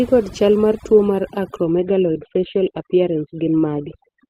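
From the start, the whole clip has overdone noise removal. The denoiser was pushed too hard, so bands near its noise estimate get gated to almost nothing. The gaps fall into near silence with little twinkling specks, and the speech loses its quieter parts, which were pulled down too.

Then at about 1.64 s, right after "chal mar tuo mar", the adaptive stream drops to a lower bitrate and stays there to the end. The switch is abrupt but gapless. Everything above 4.3 kHz vanishes and codec smearing rises, which fits a step down from roughly 64 kbit/s Opus to around 12 kbit/s.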